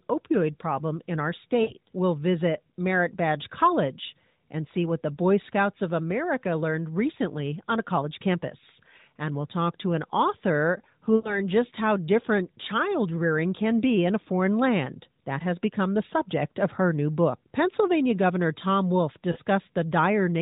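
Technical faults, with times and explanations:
1.62 to 1.73 s, 11.16 to 11.40 s and 19.32 to 19.38 s, lost AMR speech frames: speech briefly smears into a stretched, fading sound rather than a hard silence, for about 60, 80 and 40 ms, which fits runs of three, four and two 20 ms frames failing their checks. The decoder keeps repeating the last good pitch and vocal tract settings with shrinking gain, so the sound drags and decays instead of clicking off. That behaviour separates it from a plain packet dropout. Speech resumes weak or rough for a moment, still within the narrowband, sub-4 kHz mobile sound.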